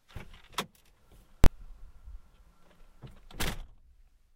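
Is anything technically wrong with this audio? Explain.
Yes. There is one fault. From 1.44 to 1.46 s, invalid numbers at full scale occur. A calculation produced infinite or invalid values, pinned at the extreme level for about 23 ms, which fits a 1024-sample block. Being this short, it is heard as a single loud bang.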